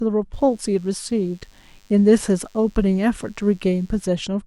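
From 0.34 s to 4.07 s, a DECT cordless phone buzz sits under the speech, roughly 40 dB below it. A nearby handset or base transmits radio bursts every 10 ms, and the audio circuitry rectifies them into a thin, steady 100 Hz buzz rich in harmonics.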